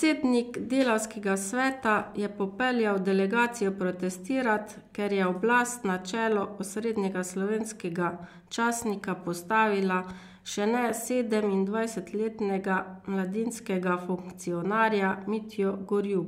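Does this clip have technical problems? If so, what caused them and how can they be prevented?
No, nothing in this speech recording stood out as a technical problem on listening, so there is no cause to trace and nothing that needs preventing.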